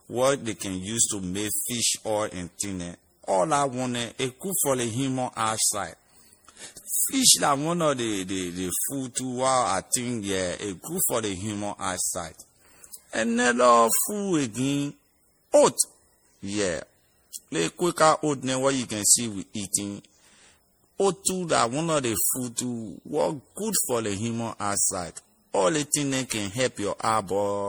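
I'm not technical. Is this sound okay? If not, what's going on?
No. The speech sounds swirly, smeared and hollow from start to finish, and the starts of sounds are blurred. This is generation loss. The recording was likely saved in a lossy format, MP3, about seven times over, and each save added more damage.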